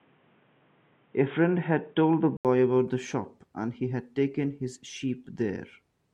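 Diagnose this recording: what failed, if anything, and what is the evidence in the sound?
Input likely switched to a poorer device at the driver stage: speech stops at 3.7 kHz and has its own hiss until 2.45 s, then an 80 ms gap and a level step of about 5 dB, unlike a smooth codec bandwidth change.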